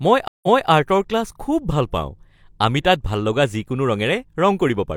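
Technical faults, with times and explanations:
0.28–0.69 s, stream reconnect: the connection dropped, leaving 0.15 s of silence. A restarted decoder then resumed 0.26 s earlier, so a stretch of speech repeats. The waveform shows a flat gap, and the spectrogram shows a blank column followed by repeated patterns.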